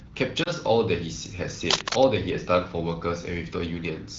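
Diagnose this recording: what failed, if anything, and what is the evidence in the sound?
The network stage failed first. A radio error corrupted one speech frame, it failed its checksum, and the AMR wideband decoder (running at 12.65 kbit/s) discarded it and concealed the gap. Concealment replays the last good pitch and vocal tract settings at reduced gain. The result is a short dip and warble in the speech around 0.44 to 0.49 s, consistent with a single lost 20 ms frame, followed by a moment of weak or rough onset as the decoder recovers.

The second failure is in the analogue wiring. The likely cause is a worn cable or connector being moved, so its contact resistance jumps around rapidly and injects irregular noise into the signal. From 1.70 to 2.17 s, dense, uneven scratching and rustling bursts sit over the speech at roughly the same loudness as the speech itself.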